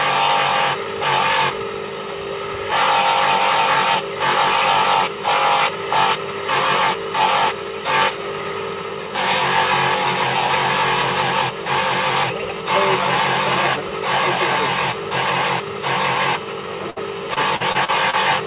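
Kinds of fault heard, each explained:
burst of packet loss: At 16.90 s the sound briefly holds and fades for about 60 ms, then jumps ahead with roughly 60 ms missing. It is one isolated gap, unlike the repeated loss that follows, which chops the sound again and again.
repeated packet loss (robotic sound): From 17.34 to 18.15 s, five short holes, none longer than 40 ms, are patched by stretching the preceding sound. About a fifth of the stretch is concealed, giving a choppy texture with pieces missing rather than one clean dropout.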